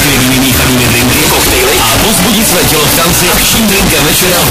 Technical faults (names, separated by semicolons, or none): float read as integer